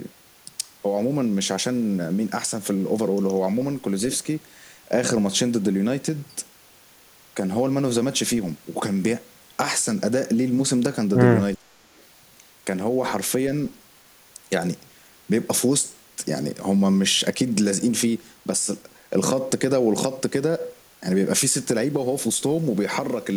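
Likely an echo canceller unable to separate talker from far-end echo during double talk, producing speech suppressed in double talk: from 11.58 to 11.84 s the speech dips by around 25 dB, with roughly 150 ms affected.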